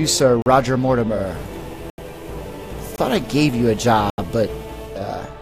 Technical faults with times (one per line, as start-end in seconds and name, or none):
0.42-0.46 block of digital silence
1.08-5.11 digital radio blending to analogue
1.90-1.98 block of digital silence
2.96-2.98 block of digital silence
4.10-4.18 block of digital silence